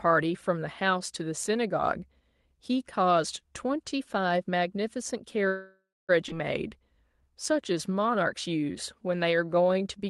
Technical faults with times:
5.47-6.11 call audio freeze
6.29-6.31 skip ahead
6.68-10.10 jitter buffer slow-down

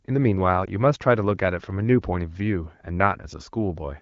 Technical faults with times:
0.65-0.70 lost AMR speech frames

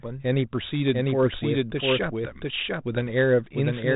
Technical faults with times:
0.00-3.95 doubled audio track

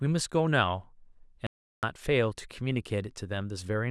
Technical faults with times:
1.47-1.83 audio dropout to silence

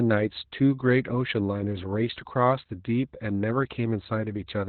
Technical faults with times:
0.00-4.69 Opus voice compression

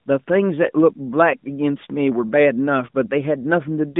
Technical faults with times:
none

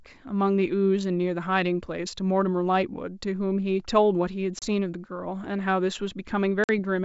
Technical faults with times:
4.59-4.67 packet loss on an ADPCM call
6.64-6.70 packet loss on an ADPCM call

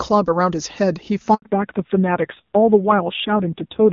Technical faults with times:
1.34-1.42 handover gap
1.42-3.92 fallback to narrowband

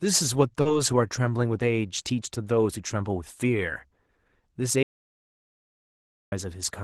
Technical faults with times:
0.61-0.67 short concealed packet loss
0.65-0.75 lost packet rebuilt from error correction
4.83-6.32 audio dropout to silence

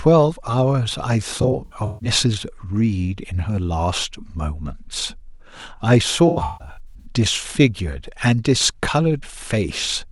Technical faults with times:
1.41-2.09 AAC frame loss with concealment
6.27-7.05 AAC frame loss with concealment

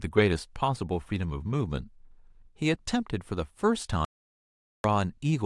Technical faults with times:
4.05-4.84 audio dropout to silence

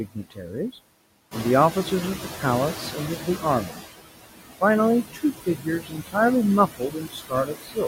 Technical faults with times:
0.00-7.87 noise suppressor artifacts
0.08-0.52 speech cut by the noise suppressor
1.31-3.80 noise suppressor catching up
3.17-3.43 speech cut by the noise suppressor
5.13-6.16 speech cut by the noise suppressor
6.78-7.83 speech cut by the noise suppressor

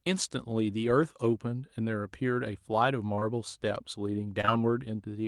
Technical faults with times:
3.15-3.23 short concealed packet loss
4.41-4.49 short concealed packet loss

